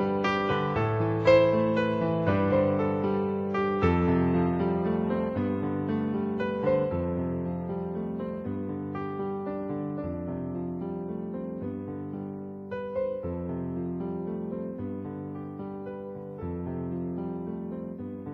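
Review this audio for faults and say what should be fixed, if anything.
No faults turn up in this audio, so nothing needs to be fixed.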